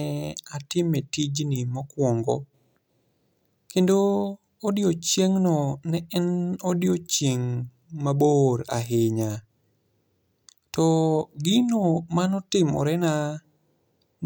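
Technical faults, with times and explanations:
No technical faults detected in the speech recording.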